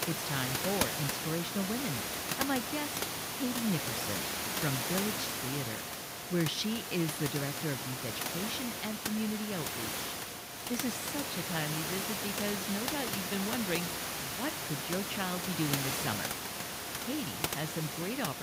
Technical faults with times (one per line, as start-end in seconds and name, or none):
none